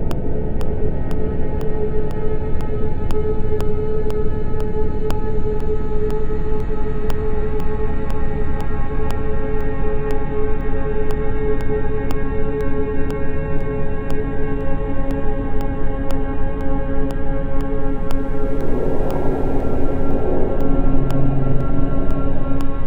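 From about 0.11 s right through to 22.61 s there are periodic USB or driver dropouts: a tick every 0.5 s, around fifty of them in all. Something in the background is stalling the USB bus or audio driver on a fixed schedule, and each time roughly half a millisecond of audio gets swapped for silence. That gap cuts the waveform abruptly, so you hear a regular click whenever there's sound.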